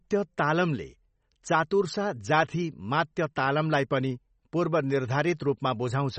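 An encoder that was likely starved of bits, in the way of MP3 compression at a low rate, shapes the speech from start to finish. With too little data to go round, it discards everything above about 8.3 kHz and drops the weaker spectral detail frame by frame. The result is a plainly audible dull, band-limited top end with a watery, swirling texture on the voice, a degree of damage that fits a rate near 32 kbps.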